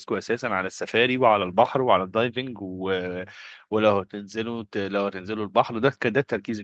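Nothing here sounds like a fault; the speech simply tops out around 8 kHz, which is what you'd expect once it has passed through a call's microphone processing and an Opus-coded WebRTC path.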